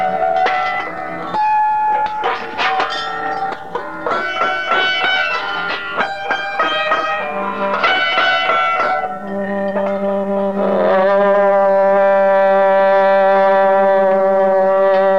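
No technical faults can be heard anywhere in the audio, and the signal stays stable and continuous throughout.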